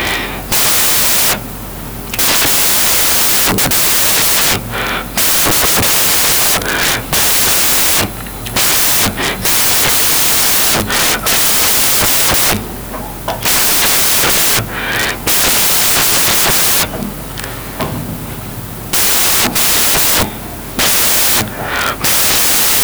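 Loud, hissing white noise fills the whole speech recording from start to finish. That is the signature of samples built from the wrong bytes: the reader is assembling each sample incorrectly, whether off by one byte, in swapped order or with the wrong alignment, so the rapidly fluctuating low-order bits land in the most significant position and swamp the actual waveform with noise.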